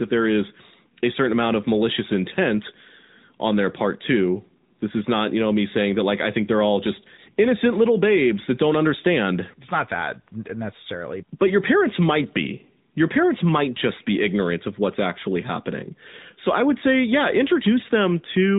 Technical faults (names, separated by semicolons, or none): AMR narrowband mobile codec